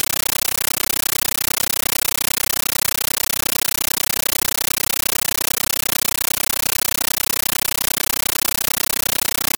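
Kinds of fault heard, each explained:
Compressed stream played as audio: undecoded AC-3 data sent as samples replaces the speech with loud static, 13.3 ms bursts repeating 31.25 times a second.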